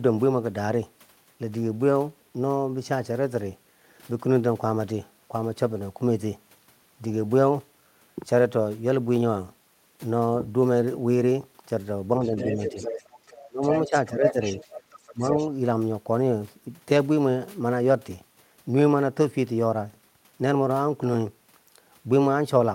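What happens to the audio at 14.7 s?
From 14.28 to 15.47 s a second, fainter voice runs underneath the main speech, roughly 10 dB quieter. This is the other side's voice leaking through, likely because the far end played on a loudspeaker and the echo canceller left part of it in the microphone signal. It differs from an echo of the talker's own voice: the leaked voice is a different speaker, not a delayed repeat of the speech heard just before.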